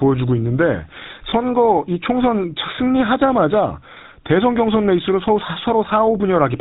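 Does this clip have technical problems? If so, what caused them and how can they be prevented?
Yes. The GSM full-rate codec coloring the whole speech clip gives a plainly audible buzzy, gravelly roughness and nothing above 4 kHz. The codec rebuilds the voice from a vocal-tract model driven by a sparse pulse excitation, and the sound points to GSM's 13 kbps full-rate mode. Using a wideband codec such as AMR-WB or Opus would prevent this.

Lost GSM frames between 1.3 and 1.33 s cause a brief rough, metallic ring. The decoder filled the gap by repeating the last good frame's settings, which fits a single missing 20 ms frame. Better radio coverage or error protection on the link would prevent the loss.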